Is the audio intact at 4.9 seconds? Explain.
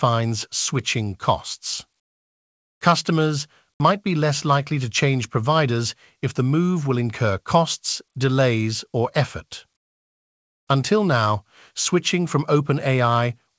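Yes, the audio is intact at 4.9 seconds: the speech passes cleanly through the WebRTC call path, whose G.722 coding leaves nothing above 8 kHz but introduces no fault at that moment.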